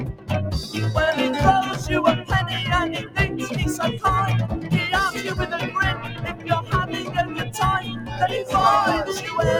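A noise suppressor designed for speech was left running on this non-speech audio. It treats sustained tones, ambience and decays as noise, so the level swings by around 10 dB and the sound pumps and thins. On a waveform the envelope visibly rises and falls in steps, and on a spectrogram the held energy looks patchy. At several points the suppressor cuts the sound well below the rest: 0.0 to 0.3 s (about 11 dB down), 2.99 to 3.17 s (about 11 dB), 4.55 to 4.71 s (about 8 dB), 5.95 to 7.53 s (about 10 dB) and 7.81 to 8.25 s (about 7 dB). These show as sudden dips in the waveform and darkened, gappy bands on the spectrogram.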